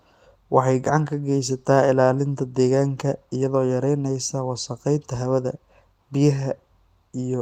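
Listening through the speech, nothing stood out as a technical problem at any point.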